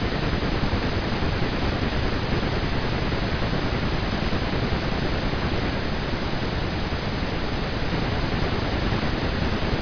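No technical faults are audible anywhere in the speech.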